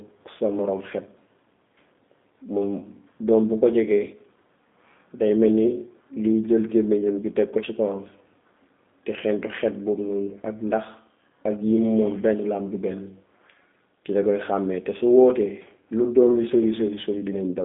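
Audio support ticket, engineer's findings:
G.729 codec across the whole speech clip, start to end. Rough, slightly synthetic, buzzy speech, still intelligible. Damage plainly audible; sound consistent with G.729A at 8 kbit/s. Mechanism: speech rebuilt from a vocal tract filter, pitch predictor and sparse pulses per 10 ms frame, not the real waveform. Spectrogram: energy confined to 200 Hz to 3.6 kHz, empty above, with smeared harmonics and grainy frame-rate texture.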